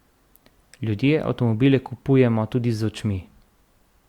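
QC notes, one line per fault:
Nothing stood out on listening to this speech.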